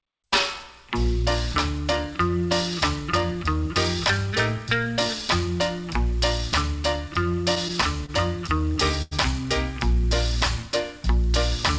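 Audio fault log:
7.32–8.10 s, repeated stalls (stutter): the jitter buffer ran dry six times, and the receiver stretched the last sound across each wait (87 ms in all, longest 28 ms), so nothing is lost but the audio hiccups. On a spectrogram, already empty above 8 kHz from the call codec, short frozen slices repeat; the waveform shows copied cycles.
8.46–9.13 s, repeated stalls (stutter): four gaps totalling 128 ms, about a fifth of the span, with the longest at 90 ms, were filled the same way, fading in that long wait. The audio drags. This shows as a flat, smeared streak on the spectrogram, with a sagging envelope in the waveform.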